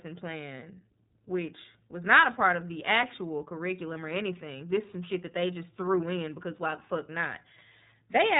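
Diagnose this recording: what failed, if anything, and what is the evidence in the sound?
Throughout the speech, the sound is dull and band-limited, with nothing above 3.8 kHz, and carries a plainly audible rough, slightly synthetic edge. The fault is at the codec stage: the iLBC codec coding each frame's excitation on its own, which fits its 30 ms, 13.33 kbps mode.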